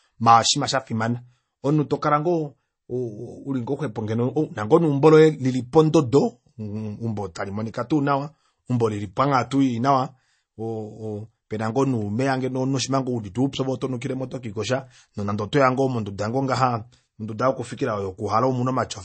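Speech runs throughout with the marks of MP3 compression, likely from an encoder starved of bits, at a rate that fits roughly 32 kbps. To save data it has cut all treble above 8.4 kHz and dropped quiet frequency lines that flicker in and out from frame to frame. The result is dull, band-limited speech with a clearly audible watery, swirling texture, metallic chirps on s sounds, and consonant attacks that smear rather than land cleanly.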